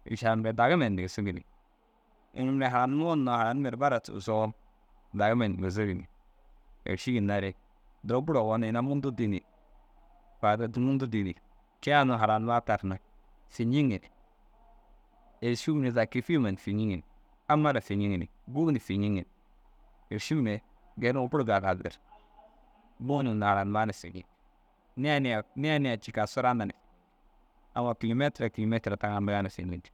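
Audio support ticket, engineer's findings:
No audible faults found in the speech recording; nothing to attribute to any component, no action required.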